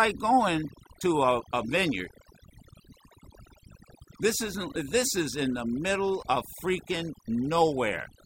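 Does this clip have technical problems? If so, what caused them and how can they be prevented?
Yes. There's overdone noise removal running through the whole clip. A noise reduction stage was pushed too hard, so any frequency band that sits close to its noise estimate gets pulled way down or shut off, and the softer parts of the speech get dragged under with it. That's why the gaps sound almost dead apart from little twinkly specks. Next time, back the reduction amount off and judge it by ear.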